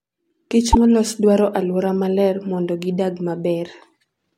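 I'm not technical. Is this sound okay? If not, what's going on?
No. At 0.72 to 0.76 s the speech briefly glitches and jumps ahead, likely from a broken MP3 bit reservoir: missing chunks left the next part unable to decode.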